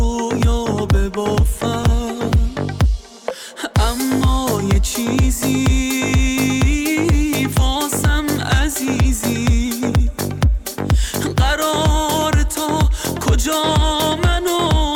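From 0.63 s to 2.71 s there is a call bitrate drop: the connection's bandwidth estimate collapsed and the encoder was forced to spend far fewer bits, with the sound pointing to a fall from roughly 96 kbps to around 21 kbps for about two seconds. Coarser coding makes the audio rough and watery, and the lost high frequencies leave it muffled. On a spectrogram the upper band abruptly empties and the remaining energy looks smeared and blocky until full detail returns at 2.71 s.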